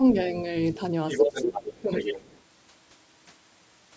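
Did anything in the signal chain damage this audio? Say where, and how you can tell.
Yes, at the call-processing stage. From 1.09 to 1.74 s there's other side's voice leaking through, about as loud as the talker, then again from 1.93 to 2.4 s, well below. The likely cause is the echo canceller failing to remove the far end's loudspeaker playback from the mic.

There's also speech suppressed in double talk between 1.19 and 1.92 s: the talker's level sinks deeply, for about half a second in total, while that second voice overlaps. The canceller likely couldn't tell the two apart and turned both down.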